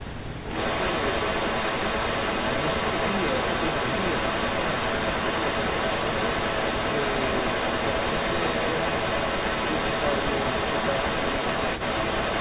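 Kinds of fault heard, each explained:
Speech suppressed in double talk: From 0.02 to 0.47 s the voice dips sharply and breaks up, with about a third of a second affected in pieces and the deepest drop reaching around 40 dB. This is likely an echo canceller that could not tell the near talker from loudspeaker echo while both sides spoke, so it turned everything down. A waveform shows the envelope collapsing into gaps, and a spectrogram shows the speech bands fading to near-silence in patches.
Echo leak: From 0.46 s to the end, a delayed copy of the voice trails the original by 366 ms, sitting around 5 dB above the speech. This is likely a loudspeaker-side echo canceller letting part of what its microphone picked up pass back into the call. A spectrogram shows each syllable's pattern repeated about a third of a second later, and a waveform shows overlapping, doubled bursts.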